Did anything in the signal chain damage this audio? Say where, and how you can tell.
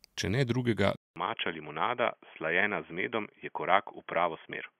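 Yes. An input switched to a poorer device at 0.96 s: after a 200 ms gap, the speech turns dull and boxy at about the same level, with nothing above 3.3 kHz and a faint new noise floor. The driver likely changed to a narrowband microphone or headset profile.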